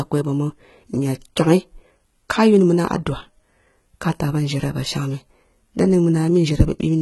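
Throughout the speech, the s sounds turn gritty and lispy, and the treble sounds metallic, with nothing above about 11.8 kHz. This is likely heavy HE-AAC compression, where the treble is rebuilt from copied lower bands instead of coded, consistent with a bitrate near 16 kbps.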